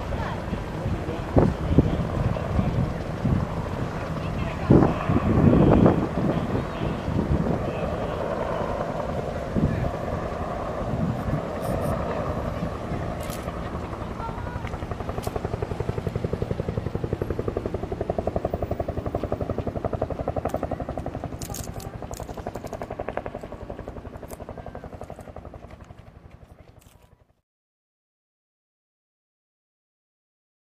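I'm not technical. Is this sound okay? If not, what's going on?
Yes, the recording is in good technical shape, with nothing going wrong at any point.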